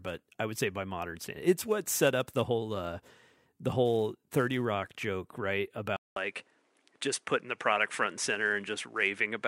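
At about 5.96 s the speech drops out for roughly 200 ms, and from there to the end it sounds duller and a bit boxier, with nothing above 11 kHz. A faint new background noise sits well below the voice, though the overall level stays about the same. That pattern points to the input likely having switched to a poorer device, a second mic or a headset's call profile with a narrower band and its own noise floor.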